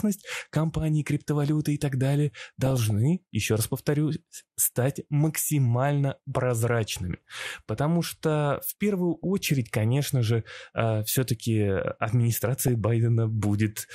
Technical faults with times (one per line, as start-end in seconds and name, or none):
0.00-13.95 MP2 compression
2.65-2.90 DAB burbling
6.84-7.83 DAB burbling
9.15-9.24 DAB burbling
12.61-12.75 DAB burbling